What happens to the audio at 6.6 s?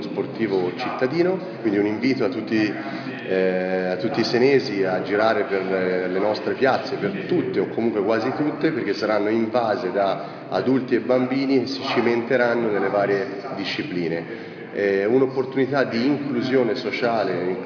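Nothing goes wrong at 6.6 s; the audio plays through that moment intact, with no dropout, click or other fault.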